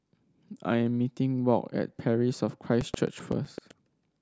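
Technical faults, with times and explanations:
2.69–3.83 s, buffer tearing: writer and reader cross each period, splicing a sliver of half-second-old audio between hard joins, giving a rattle at 7.81 Hz, consistent with 2048-sample buffers.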